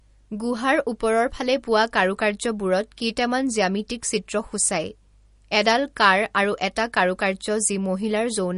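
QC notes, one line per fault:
Throughout, MP3 compression: the speech has a watery, swirling texture, and its s sounds come out metallic and chirpy, with consonant attacks smeared. On a spectrogram the energy stops flat at 10.6 kHz, and above that is an empty band. Below it, patches of weak detail flicker in and out from frame to frame. The likely cause is a starved MP3 encoder dropping treble and faint frequency lines to save bits, which fits a rate of about 40 kbps.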